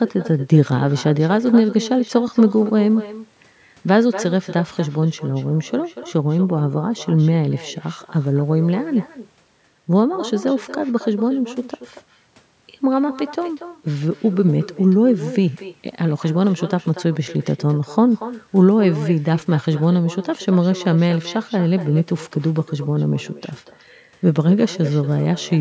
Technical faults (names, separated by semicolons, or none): echo with no canceller